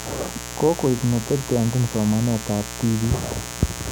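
A steady, raspy buzz sits under the speech from start to finish, loud enough to compete with it at roughly 10 dB below the speech level. This is mains buzz at a 60 Hz fundamental. Sharp switching spikes from the power supply, arriving twice every mains cycle, have leaked into the signal path, perhaps through a dimmer, a rectifier or a missing shield. They spread harmonics of 60 Hz up into the kilohertz range, giving the buzz its gritty edge.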